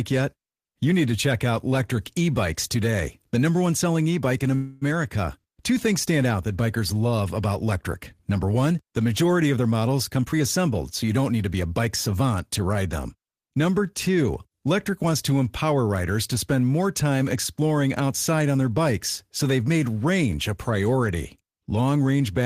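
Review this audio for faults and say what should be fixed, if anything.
At 4.55 s the speech stops and a fading buzz or hiss fills about 261 ms until 4.83 s, then resumes where it left off. That's a call audio freeze, likely from delayed packets draining the jitter buffer, so the gap adds 261 ms of delay without losing anything. A larger or adaptive buffer would ride this out.

From 10.15 to 12.09 s, between "majority of their models" and "to ride them", the speech hurries along at about 113% speed with unchanged pitch. That's a jitter buffer speed-up: tiny pitch-period slices, roughly 300 ms in total, get cut out to shed the backlog. Gentler buffer targets would avoid it.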